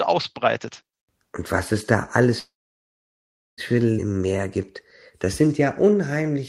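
From 2.39 to 3.61 s, just after "was es da", packets were likely held up and the jitter buffer ran dry: a call audio freeze, where the last sound fades into about 1.1 s of silence before resuming where it stopped. At 3.98 s a skip ahead follows, with roughly a second of audio dropped and the two sides joined almost seamlessly. Then the jitter buffer slow-down rebuilds its reserve by repeating pitch periods, stretching the audio at unchanged pitch: 4.13 to 4.38 s plays at 83% speed, and 5.25 to 6.42 s at 93%, both audibly drawn out.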